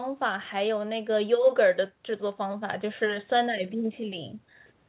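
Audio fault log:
No faults are heard anywhere in this speech.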